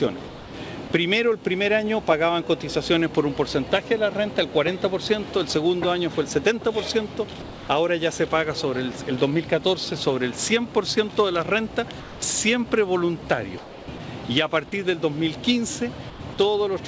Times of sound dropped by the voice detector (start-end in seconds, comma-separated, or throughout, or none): 0.28-0.54, 0.88, 7.42-7.68, 12.00-12.22, 13.58-14.00, 16.10-16.38